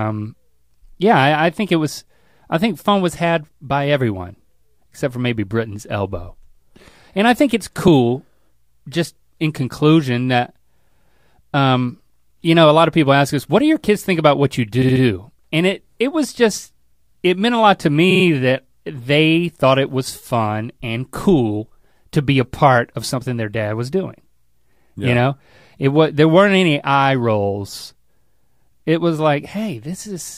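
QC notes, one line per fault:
7.88 s, repeated frames: after "I think it's", a 2.9 ms block plays twice, consistent with one duplicated frame, giving a brief stutter.
14.81–15.02 s, repeated frames: after "think about what you", a 69.7 ms block plays three extra times, a stutter adding 209 ms.
18.10–18.24 s, repeated frames: between "meant a lot to" and "that they thought it", a 46.4 ms block repeats three extra times, stuttering and adding 139 ms.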